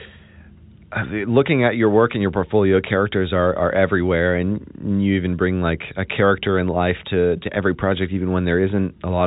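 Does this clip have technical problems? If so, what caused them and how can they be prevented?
No, this speech clip has no technical problems.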